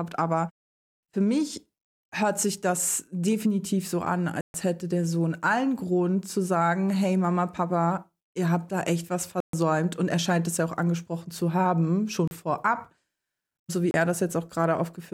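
Speech cuts to silence for 132 ms at 4.41 to 4.54 s after "das definitiv so an", for 130 ms at 9.40 to 9.53 s after "habt da echt was", for 36 ms at 12.28 to 12.31 s after "auch angesprochen zu haben", and for 30 ms at 13.91 to 13.94 s. These are likely Bluetooth stalls, where the headphones' buffer ran dry while delayed packets were resent. Unlike codec glitches, the gaps are clean silence, after which the sound picks up again.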